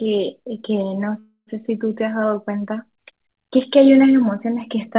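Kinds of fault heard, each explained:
Call audio freeze: at 1.19 to 1.50 s the sound is stretched into a fading buzz or hiss, about 0.28 s in all, ending in about 70 ms of silence, likely from delayed packets draining the jitter buffer. Speech resumes where it stopped with nothing missing, about 0.28 s late.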